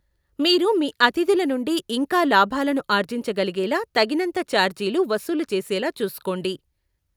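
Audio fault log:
Nothing to log here; this bit of speech comes through without a single fault to point to.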